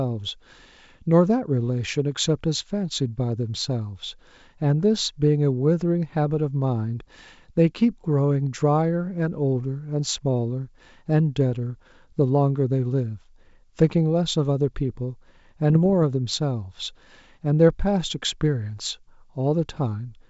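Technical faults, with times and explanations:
15.70 to 15.93 s, bit errors on an ADPCM link: a short cluster of pops and rough, gritty bursts with brief level jumps. Each flipped bit throws the decoder's step size and predictor off, so damage rings on for milliseconds, unlike a clean dropout or single click. The steady, faint upper-band hiss of the G.722 wideband coding, which runs throughout, is a separate, constant texture.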